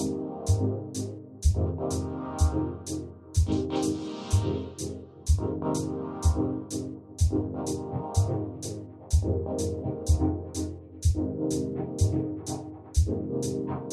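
Nothing here calls for a technical note, since the sound runs along without any fault to point to.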